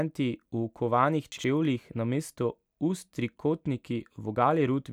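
At 1.32 s the speech has a short stretch of chunks out of order, lasting until 1.44 s. The audio here is handled in 60 ms chunks, and one chunk arrived late and played one slot after the chunk that should have followed it, so two neighbouring 60 ms pieces are swapped. Nothing is missing, but this creates three hard joins, and the 0.12 s span sounds briefly jumbled and garbled.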